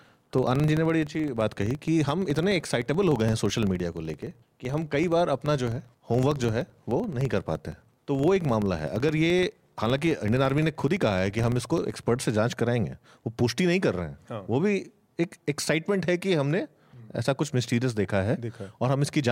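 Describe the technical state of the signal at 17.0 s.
At 17.0 s the speech signal is intact, with no audible fault at that moment.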